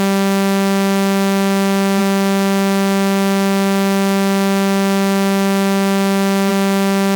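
At 1.98 s and again at 6.48 s, compressed frames are skipped. The audio jumps ahead by about a fifth, then about a third, of a second. This fits whole 46.4 ms frames going missing.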